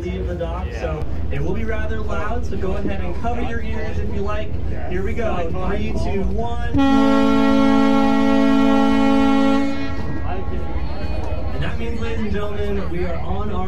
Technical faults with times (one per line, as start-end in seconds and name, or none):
1.02-13.67 DC step